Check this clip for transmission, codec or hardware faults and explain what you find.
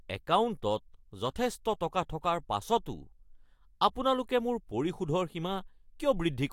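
I found no faults in this clip to explain.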